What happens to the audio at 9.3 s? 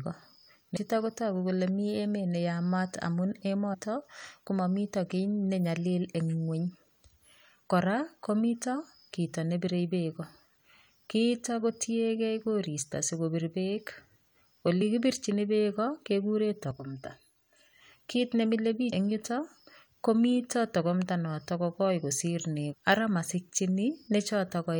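Nothing goes wrong at 9.3 s: the speech carries on intact through that moment, with no audible fault.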